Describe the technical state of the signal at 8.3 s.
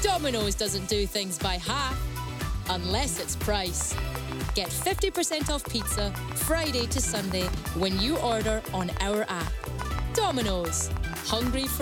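Something, likely nearby equipment interference or a faulty connection or power supply, is injecting a regular pulse into the signal. At 8.3 s this train of clicks is underway, running from 3.81 s to 11.65 s at 6 clicks per second. It is heard as steady, same-shaped ticking that stands well above the sound, including the pauses.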